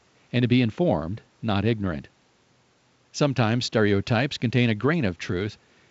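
No technical faults can be heard in this speech recording. A low room noise sits about 43 dB below the speech, and the sound stops just below 7.7 kHz, which fits G.722 wideband telephone coding at its full 64 kbit/s rate.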